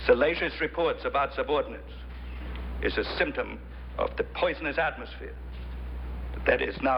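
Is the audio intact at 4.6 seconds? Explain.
No. At 4.6 s, as throughout the clip, one channel arrives a few samples late, under a tenth of a millisecond, and the two channels are then summed to mono. Summing a signal with a slightly delayed copy of itself causes channel delay comb filtering: the shared content cancels at regularly spaced frequencies, with the first notch around 7 kHz. The sound is hollow and phasey, with fixed gaps in the upper spectrum.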